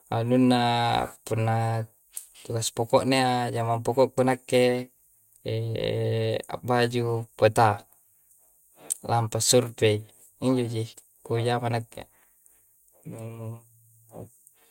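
A speech recording with no audible technical faults anywhere in the signal.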